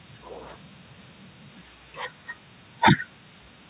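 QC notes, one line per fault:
The speech comes through a call path working as intended, with nothing above 4 kHz and the narrowband character that points to G.711 mu-law at 64 kbps.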